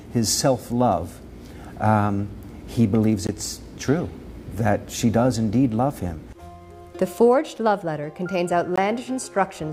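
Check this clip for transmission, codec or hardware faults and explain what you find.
Two brief gaps of silence occur, at 3.27 s and 8.76 s, each about 19 ms long. They are likely a Bluetooth dropout, where a packet missed its delivery window and was discarded. The sound cuts out and resumes further along, as though it had kept playing. The waveform shows a flat stretch, and the spectrogram shows a thin vertical blank band. A gap that short fits a single lost packet.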